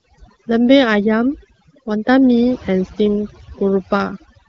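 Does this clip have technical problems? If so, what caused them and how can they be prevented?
Yes, overdone noise removal throughout: bands near the noise estimate get cut hard, leaving a lowered background that breaks up into twinkling specks. Next time, ease off the reduction strength or fix the noise at the source.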